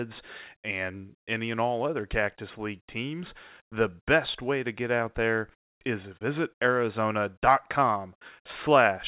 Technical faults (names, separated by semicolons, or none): none